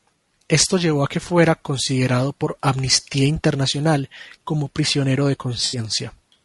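From the start, the speech sounds rough and grainy, with noise filling the gaps between harmonics and a thin, synthetic top band. This is likely low-delay AAC compression, with short frames smearing the harmonic comb, in a way that fits roughly 32 kbps. On a spectrogram the harmonic lines look blurred over a noise floor.

From 5.65 to 5.79 s, just after "como prisionero de", AAC frame loss with concealment leaves a smeared, phasey patch. The decoder rebuilt missing audio from the last good spectrum, pointing to about four lost frames. The spectrogram shows a frozen, noisy block.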